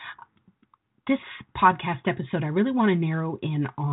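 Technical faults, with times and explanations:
No technical faults can be heard in this recording.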